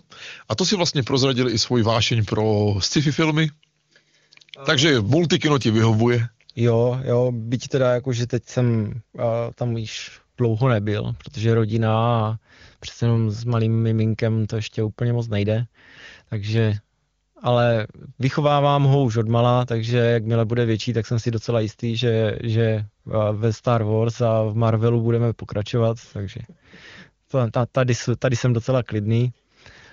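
Nothing stood out on listening to the speech here, which carries the mild band-limited character of a high-rate HD Voice (AMR wideband) call path.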